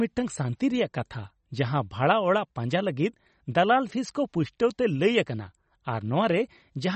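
From start to end, the speech carries plainly audible artefacts that point to MP3 compression, likely at a low bitrate around 32 kbps. Short of bits, the encoder drops weaker frequency lines that flicker on and off between frames, giving a watery, swirling texture, and nothing survives above 8.3 kHz. A plain low-pass filter would dull the treble the same way but leave no swirl. Here the shifting, frame-to-frame artefacts mark it as a codec.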